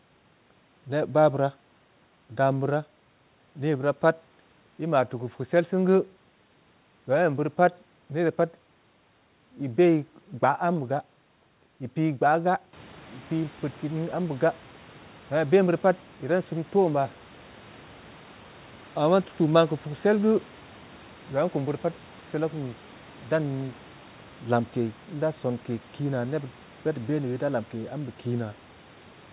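The speech is band-limited to nothing above 4 kHz, which fits a G.711 mu-law call path at 64 kbps, and the room noise rises by about 13 dB a little past 12 s while staying about 28 dB below the speech, with no technical fault anywhere in the signal.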